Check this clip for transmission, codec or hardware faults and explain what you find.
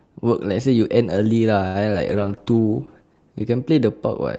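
Three transmission faults are audible in this speech, all typical of a call path running Opus at 32 kbps with audio band-limited to about 8 kHz.

At 1.67 to 1.77 s there is a short stall from a late packet. The jitter buffer ran dry, and the receiver stretched the last sound for about 75 ms until the data arrived, then resumed where it left off. Nothing is lost, but the sound is held unnaturally long, and playback runs 75 ms later from then on.

At 1.93 to 1.96 s there is a short concealed packet loss. About 20 ms of audio never reached the decoder in time, and the receiver covered the gap by extrapolating the preceding sound before blending back. This is heard as a brief smear or wobble where a fragment drops out.

From 2.08 s to the end there is a call bitrate drop. The bandwidth estimate fell, and the encoder went from 32 to 11 kbps, staying at its lowest for about 1.4 s. Coarser coding makes the speech sound rough, watery and duller.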